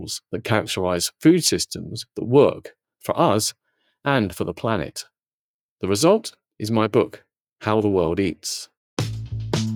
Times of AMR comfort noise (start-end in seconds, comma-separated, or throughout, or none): none